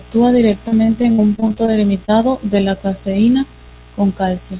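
From 0.68 to 1.70 s there is repeated packet loss, giving a robotic sound. Nine short gaps fall in this stretch, the longest about 62 ms. Each is patched by extending the preceding sound, so roughly a quarter of the span is filled in. The speech turns choppy, with pieces missing.

From 2.06 to 2.10 s, just before "de la caseína", a short concealed packet loss occurs. About 20 ms of audio never arrived in time. The receiver continued the last sound, then blended back in, leaving a brief smear or wobble. Throughout, nothing sounds above 4 kHz, which fits a narrowband G.711 A-law call path.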